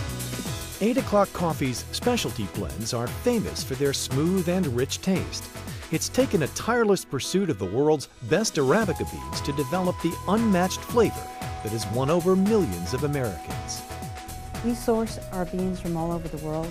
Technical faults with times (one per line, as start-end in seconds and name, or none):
none